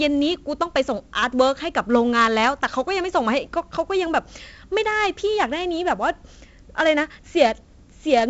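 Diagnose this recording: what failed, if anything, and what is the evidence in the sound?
The codec stage failed, with 4-bit ADPCM compression damaging the speech throughout. A gritty hiss rides on every loud passage and tracks its level, and sharp onsets distort where the adaptive step lags. Nothing reaches above 7.7 kHz, which fits a 64 kbps stream.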